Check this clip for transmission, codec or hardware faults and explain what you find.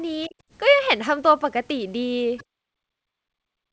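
Three kinds of echo-canceller fault are audible, all on a wideband call path whose top end stops at 8 kHz.

Other side's voice leaking through, at 0.23–0.28 s and 2.37–2.44 s. A second, thin voice sits under the speech: very faint in the first spot, somewhat louder (still well below the talker) in the second. Each is a brief scrap rather than a sustained voice. The likely cause is that the far end played through a loudspeaker reached the microphone and was not fully cancelled.

Speech suppressed in double talk, at 0.28–0.35 s and from 2.93 s to the end of the clip. The talker's level drops: by roughly 20 dB for about 70 ms in the first case, and by as much as 40 dB across the final stretch, where the speech thins and breaks up. This is likely the canceller failing to tell the near talker from the loudspeaker echo while both were active, and attenuating everything together.

Background gated by the echo canceller, at 2.44–2.65 s. 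Directly after the second leak, the room sound falls away by about 37 dB for roughly 200 ms, then returns. The canceller clamped down on the microphone while the loudspeaker was active and released once it stopped, so the ambience collapses to near silence for that moment.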